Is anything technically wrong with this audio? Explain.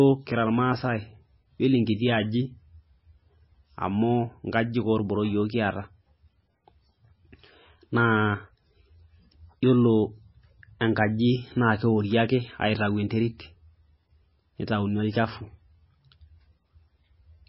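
Yes. Throughout the speech, heavy MP3 compression is the likely cause: starved of bits, the encoder discards everything above 5.6 kHz and zeroes weak frequency lines that flicker between frames. The result is dull, watery, swirling sound with smeared attacks, which fits a bitrate near 17 kbps.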